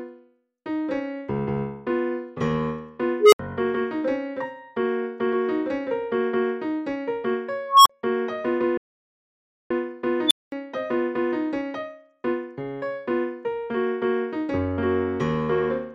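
Unstable filter, 3.20 to 3.39 s: a recursive filter runs away, so a tone around 400 Hz swells over 121 ms, clips, then overflows into a 70 ms silence.

Unstable filter again, 7.68 to 7.90 s: a tone near 1 kHz builds over 180 ms into a loud squeal, then cuts to 39 ms of silence.

Audio dropout to silence, 8.78 to 9.70 s: the sound stops dead for 929 ms of silence with no room tone, likely from the input being lost while recording continued.

Unstable filter, 10.27 to 10.52 s: a high tone around 4 kHz explodes within 34 ms, clips, and leaves a 214 ms silence before the filter resets.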